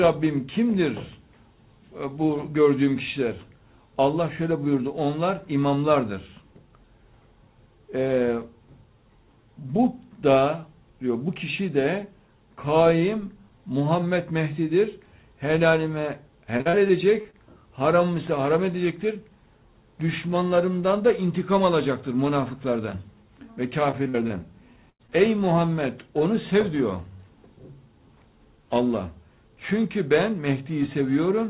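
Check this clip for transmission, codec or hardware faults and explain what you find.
Four kinds of fault are audible, all in the second half, heard through a band that stops at 4 kHz, which fits G.711 A-law at 64 kbps.

Repeated packet loss (robotic sound), 16.58 to 17.35 s and 23.91 to 24.32 s. Packets went missing again and again. The receiver patched each hole by extending the previous sound, and the next hole followed soon after. The first stretch has six gaps, the longest 39 ms, with about a fifth of the span synthetic. The second has four gaps, the longest 46 ms, with about a quarter synthetic. Both come out choppy and mechanical, with small pieces of audio missing.

Periodic clock jitter, from 18.13 s to the end. Interference at around 1 kHz is shaking the converter's sampling clock, so every component of the sound picks up sidebands spaced that far above and below it. Higher-frequency content is hit hardest. 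The result is a gritty, metallic edge laid over everything that sounds, and it drops away whenever the audio goes quiet.

Burst of packet loss, 24.90 to 25.01 s. About 100 ms of audio never arrived in time. The receiver covered roughly 94 ms of it by extending and fading the last sound, so a tone becomes a held buzz and noisy material a dying hiss. Playback then picks up further along, and the missing portion is simply gone. It lands just after the second robotic stretch.

Short concealed packet loss, 25.07 to 25.10 s. Barely 20 ms went missing, and the receiver filled about 10 ms of that by continuing the preceding sound before blending back into real audio. Coming immediately after the burst, it adds a brief smear or wobble, and a very short sound at that point can disappear outright.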